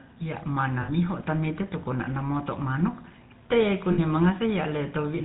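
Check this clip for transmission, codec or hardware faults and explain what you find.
The speech has two codec-related faults, one throughout and one in two short bursts.

GSM full-rate codec, throughout: the speech was coded by modelling the vocal tract and driving it with a sparse, regularly spaced pulse excitation, with nothing passed above 4 kHz. That gives a plainly audible buzzy, gravelly roughness and a dull top end, which fits the 13 kbps full-rate coder.

Lost GSM frames, at 0.82 to 0.89 s and 3.92 to 3.99 s: the decoder got no usable data for about 60 ms each time, which fits three lost 20 ms frames. It repeated the last good frame's settings, so the sound briefly hangs as a rough, metallic ring.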